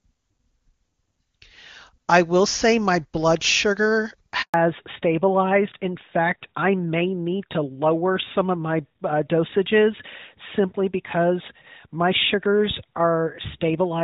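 At 4.42 s the speech drops out in a handover gap: the call switches networks and no speech frames arrive for 120 ms, until 4.54 s. The voice fades within a few tens of milliseconds and falls silent. A waveform shows a flat line and a spectrogram shows a blank vertical strip across all frequencies. Whatever was said in that gap is simply missing, and the sound resumes when the new link comes up.

From 4.54 s to the end, the call falls back to narrowband. Before the switch the speech is HD Voice carried by the AMR-WB codec at a rate that fits 23.85 kbit/s, with faint or no codec damage. After it, the AMR-NB codec at a rate that fits 12.2 kbit/s passes nothing above 4 kHz. The voice turns duller and rougher. On a spectrogram, the energy above 4 kHz cuts off sharply at 4.54 s.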